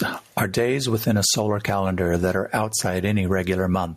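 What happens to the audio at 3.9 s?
Gain pumping is present at 3.9 s, as it is across the whole clip. The likely cause is input gain set far too high for the microphone, so a fast limiter or compressor clamps down on each loud syllable and then releases. The gain ducks whenever the speech gets loud, with a swing of around 20 dB. Loud and quiet passages sit unnaturally close in level, giving the speech a squashed, breathing quality.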